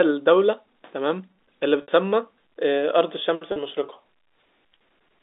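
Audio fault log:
1.82–1.88 s and 3.52–3.56 s, packet loss with pitch repetition: Audio drops out for 60 ms, then for 40 ms. That fits three and then two 20 ms packets going missing. The receiver fills each gap by repeating the last pitch period. This gives a brief held, buzzy tone in the narrow telephone-band sound. The repeat fades over about 50 ms, so the longer gap dips nearly to silence. The sound then returns through a short cross-fade.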